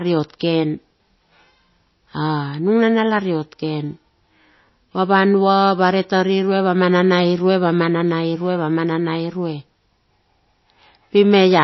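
From start to finish the speech sounds watery and swirly, with a metallic chirp clinging to the s sounds and softened attacks, and nothing is heard above about 5.8 kHz. This is plainly audible codec damage, likely MP3 compression at a starved bitrate, consistent with something near 24 kbps: the encoder cuts the treble at a fixed point and drops weak frequency lines that flicker between frames, producing the swirl.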